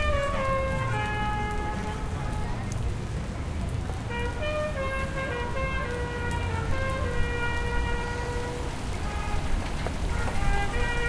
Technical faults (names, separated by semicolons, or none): none